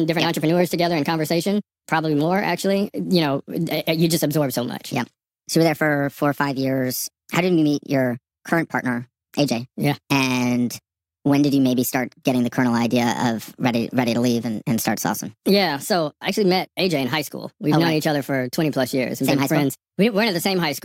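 From start to finish the speech sounds high and hurried, running 1.38 times too fast and pitched about 5.5 semitones up. That is a wrong sample rate: the samples play back faster than they were captured, which fits 32 kHz audio played at 44.1 kHz without conversion.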